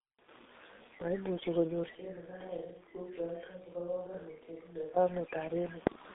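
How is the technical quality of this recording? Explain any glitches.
The technical quality is poor: the speech is band-limited and coded heavily throughout, and for three seconds in the middle the pickup changes character.

Throughout, the voice sounds muffled and hoarse, consonants are smeared, and nothing is heard above about 3.8 kHz. This is the G.723.1 codec at 6.3 kbit/s: its 30 ms frames and slowly updated voice model, squeezed into a telephone band, blur quick detail and roughen the tone.

From 1.95 s to 4.96 s the speech suddenly turns roomy and hollow, drops about 10 dB, loses bass and gains faint background noise, then snaps back. This is likely a switch to a distant microphone, picking up more room reflection and less direct sound.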